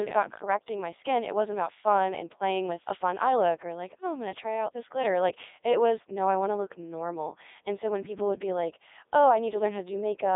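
This speech clip is run through the Codec 2 vocoder for its whole length, heavily damaged, with a robotic, buzzy quality consistent with its top 3.2 kbit/s mode. The decoder rebuilds the voice from sine waves driven by pitch and spectral-envelope data, confined to roughly 300 Hz to 3.7 kHz.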